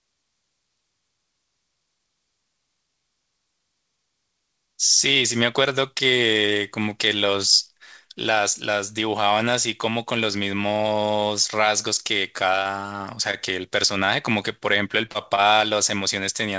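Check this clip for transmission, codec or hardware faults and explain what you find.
There are two kinds of network fault in the last few seconds, both typical of a call running over a jittery link. The audio came through a G.722 call path, so nothing sits above 8 kHz.

Short stalls from a late packet occur at 12.63, 13.31, 14.05 and 15.36 s, each lasting about 50 ms, with the first closer to 70 ms. In each case a packet turned up late and the jitter buffer ran dry. The receiver held the last bit of speech for roughly 20 ms until the packet arrived, then picked up exactly where it had stopped, so no speech is lost. You hear a sound hang on a beat too long, with a faint buzzy dip.

Short concealed packet loss happens at 15.06 s, with a second hole right after it at 15.11 s, forming one rough patch of about 0.11 s. Each time, around 30 ms of audio never reached the decoder. The receiver bridged the gap by extending the preceding sound, following its pitch when it was voiced and using shaped noise when it wasn't, then crossfaded back into the real signal. 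That comes across as a quick smear or wobble, and a short consonant in there can drop out entirely.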